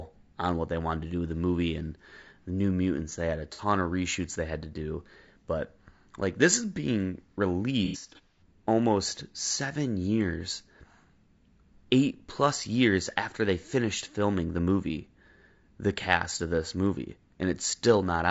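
Speech, with roughness and graininess throughout, noise between the harmonics and a thin synthetic top band, most likely from low-delay AAC compression at about 32 kbps, whose short frames resolve pitch poorly. AAC frame loss with concealment causes a brief smeared, noisy or phasey patch from 3.53 to 3.61 s, about 60 ms of missing audio, and a longer disturbed stretch from 7.85 to 8.42 s, where about 300 ms is lost in gaps scattered over roughly half a second. There the decoder repeats and scrambles the last good spectrum, and the longest gaps run to around 100 ms.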